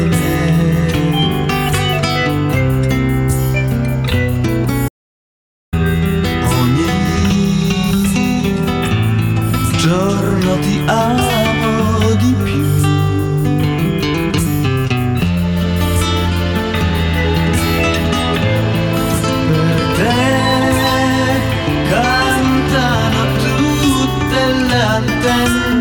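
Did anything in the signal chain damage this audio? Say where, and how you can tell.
Yes. At 4.88 s the audio cuts off abruptly mid-flow and the track falls to silence, with no room tone or noise floor at all, until it resumes just as abruptly at 5.73 s. Roughly 0.84 s of material is simply missing. That is an audio dropout to silence, most likely at the input stage: the source device or its link stopped delivering audio, and the recorder kept writing silence through the gap.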